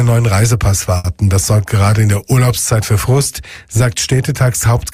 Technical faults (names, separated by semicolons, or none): short stall from a late packet